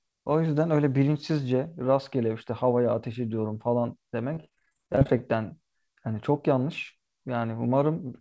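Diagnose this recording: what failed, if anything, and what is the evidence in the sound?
Network stage: repeated packet loss (robotic sound), 4.34 to 5.21 s. Holes up to 26 ms are patched by extending the last sound, so it turns choppy.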